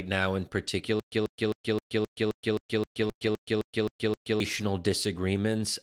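From 1.00 to 4.40 s the speech falls into a stutter with silent gaps: a 139 ms fragment replays 13 times at a steady 263 ms period, with about 124 ms of digital silence after each. The likely cause is a stalled player or stream re-serving its last buffer on each retry, so the audio meant for that stretch never plays.

At 1.79 to 1.83 s a short concealed packet loss covers 20 ms of missing audio. The decoder extends the preceding sound and crossfades back, leaving a brief smear.

At 3.03 to 3.09 s two lost packets are rebuilt from error correction, giving 40 ms of audible roughness from the low-bitrate redundant copies.

From 3.11 to 3.22 s three back-to-back short concealed packet losses, each 20 ms missing, produce a wobbling, smeared patch.

From 3.22 to 3.28 s two more lost packets are rebuilt from error correction, giving another 40 ms that sounds grainy.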